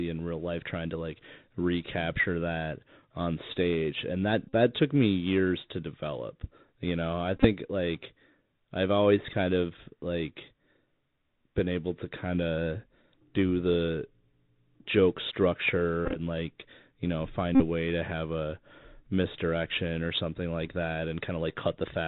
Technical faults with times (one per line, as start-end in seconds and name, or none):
0.00-22.07 Bluetooth CVSD headset codec
4.49-4.53 Bluetooth headset packet repeated
7.36-7.46 Bluetooth headset packet repeated
16.05-16.17 Bluetooth headset packet repeated
17.55-17.62 Bluetooth headset packet repeated